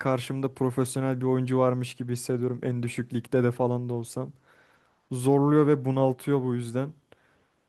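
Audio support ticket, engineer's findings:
No audible faults found in this speech recording.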